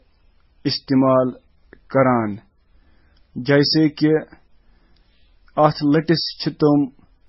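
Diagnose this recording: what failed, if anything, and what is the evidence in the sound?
The damage is at the codec stage and runs through the whole speech clip. Nothing survives above 5.6 kHz, and different flavours of swirly smearing sit on top of each other. That's likely transcoding between lossy codecs: low-bitrate MP3, then Vorbis, then MP3 again. Each pass re-encodes the last one's junk, and the lowest cut-off sticks.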